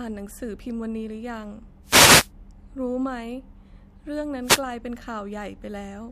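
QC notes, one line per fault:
1.83–2.31 s, wireless microphone noise hit: a swish of static as the FM radio link fades, receiver hiss rising over the speech rather than the signal cutting cleanly like a digital dropout.
4.42–4.63 s, wireless microphone noise hit: a shorter burst of the same hiss, the fade briefly raising broadband noise instead of leaving the silent gap of a digital dropout.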